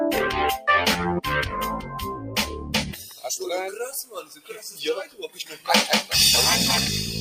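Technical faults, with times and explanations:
Throughout: noise suppressor applied to music or sounds. A speech-tuned noise suppressor is left running on this audio. It mistakes steady tones and ambience for noise and keeps pulling them down. Its gain swings by roughly 10 dB as it decides what to keep. Sharp onsets mostly pass, but held parts and tails sink. The result is a pumping, thinning quality that comes and goes with the sound.
2.54–2.72 s, 2.93–3.25 s, 4.05–4.63 s and 5.03–5.68 s: sound cut by the noise suppressor. In each stretch the suppressor judges the sound to be noise and ducks it harder than elsewhere. The drops deepen over the clip: about 4 dB, then about 9 dB, about 11 dB and about 13 dB. The cuts also lengthen, from about 0.2 s to about 0.7 s. Sustained and decaying parts lose level or end early, so these passages sound hollow and abruptly shortened.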